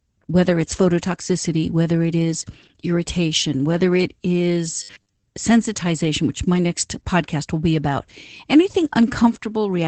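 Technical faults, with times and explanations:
throughout: Opus voice compression. Around 12 kbps in SILK mode, the band stops near 8 kHz and coarse coding leaves the speech plainly muffled, hoarse and slightly robotic.
4.83–5.24 s: robotic sound from repeated short buffers, between "irritation whether it is" and "sensitization which my next". A rigid 100 Hz metallic buzz covers the speech, likely from roughly half the audio being replaced by repeats of about 10 ms segments.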